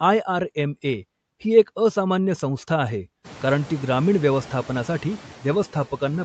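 Throughout, background noise dips between words and swells beneath them: noise suppressor artifacts, the suppressor pulling steady noise down about 9 dB frame by frame.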